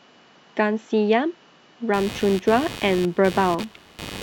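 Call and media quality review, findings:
Buzzy, chirping interference from 1.94 s to end, pulsing roughly 100 times a second, about 15 dB below the speech, independent of it. Computer activity noise: processor or GPU load shifts disturbing the audio circuit's shared ground, coupling onto the signal.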